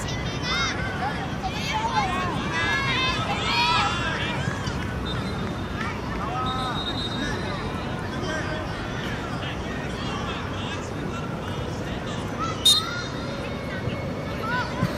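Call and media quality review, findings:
No audible faults found.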